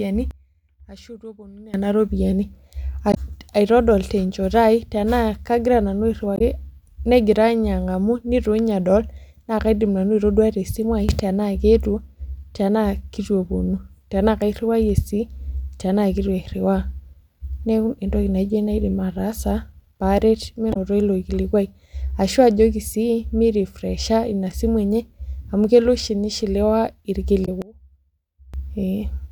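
Speech in which the level and background abruptly fall by about 20 dB from 0.31 to 1.74 s and from 27.62 to 28.54 s, and leap up by about 17 dB from 11.09 to 11.20 s. These are sudden gain jumps, likely digital gain applied instantly without a ramp. Brief chirps or blips about 60 ms long occur at 3.11 s, at 6.35 s just after "kagira nanu", at 20.70 s just before "ilo kilikuai ashua ajoki", and at 27.42 s just after "amu kelo oshi nishiliwa". These are damaged data in a compressed stream, where the decoder misreads corrupted frames and resyncs at the next header.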